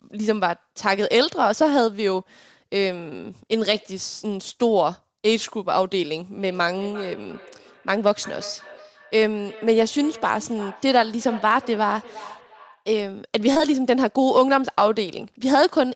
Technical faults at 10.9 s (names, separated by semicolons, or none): feedback echo between two devices